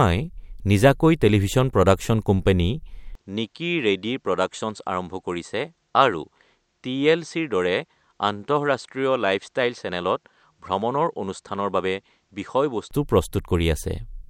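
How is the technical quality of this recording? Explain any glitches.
From 3.15 to 12.91 s, just after "নিজাকৈ টেলিভিছন প্ৰডাকচন কোম্পানী", the speech turns duller and about 5 dB quieter, with nothing above 8.4 kHz and a faint new noise floor well below it. This is likely the input switched to a poorer device, with no gap at either change.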